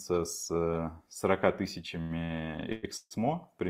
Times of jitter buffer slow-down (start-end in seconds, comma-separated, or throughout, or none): none